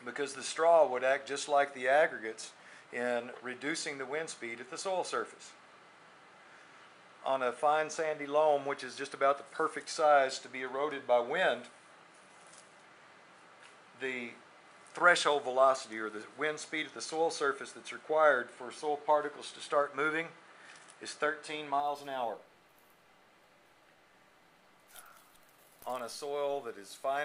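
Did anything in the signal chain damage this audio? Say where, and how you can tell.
Yes. From the start until 21.8 s the sound is dull and boxy, with nothing above 10.5 kHz and a faint noise floor sitting well below the signal. At 21.8 s it suddenly opens up, with no gap at the change, and the level shifts by a few decibels. This points to the capture stage at the driver or device level. The input was likely switched to a poorer device, whose narrower band, own noise and different gain were replaced mid-recording by the normal path.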